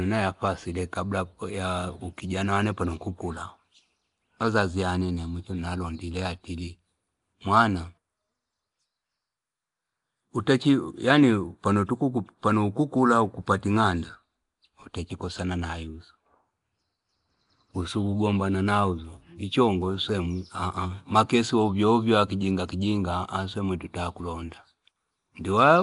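From start to finish the speech carries a rough, hissy halo and a smeared, underwater quality, with nothing at all above about 10.6 kHz. That combination likely comes from Nellymoser compression, the old Flash microphone codec. It codes short blocks at a fixed two bits per sample, so quieter bands get starved and are filled in with noise, hence the hiss. The damage is plainly audible and fits a rate somewhere around 44 kbps.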